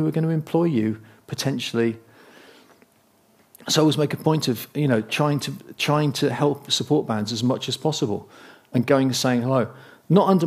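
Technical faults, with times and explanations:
No technical faults can be heard in this clip.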